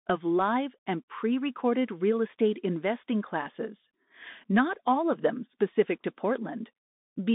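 Throughout, the speech runs through a Bluetooth CVSD headset codec. Only 150 Hz to 3.7 kHz passes. One-bit step tracking adds grainy hiss and scratchy s sounds.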